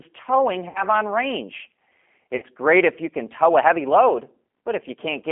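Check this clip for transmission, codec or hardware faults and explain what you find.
Two faults are present: low-bitrate G.729 coding across the whole clip, and two short dropouts patched over by the decoder's packet loss concealment.

G.729 codec (throughout): The speech is carried through a narrow 200 Hz to 3.4 kHz line band and rebuilt by a G.729-type decoder, which fits an 8 kbit/s stream. Instead of sending the waveform, the codec sends a vocal tract filter, a pitch predictor and a sparse pulse excitation, and the decoder resynthesises the speech from those. The damage is plainly audible: the speech sounds rough and slightly synthetic. On a spectrogram, energy stops at a flat ceiling near 3.4 kHz, and the harmonics look grainy rather than clean.

VoIP packet loss concealed by the speech codec (0.69 to 0.84 s, just before "on range"; 2.36 to 2.45 s, just before "great if you can"): Each gap covers about 60 ms of lost audio, which fits a couple of missing packets. 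For those frames the decoder keeps extrapolating from its last pitch and filter while lowering the gain. Each gap is heard as a buzzy, stretched tone or coloured noise that fades, and the speech stays weak for a moment after it resumes. A spectrogram shows smeared energy that dims across each gap, and the waveform shows shrinking amplitude.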